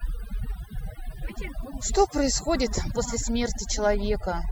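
Overdone noise removal runs throughout the speech: aggressive spectral gating drops bands near the noise floor, leaving twinkling specks between phrases. A spectrogram shows scattered isolated blobs on a near-black background.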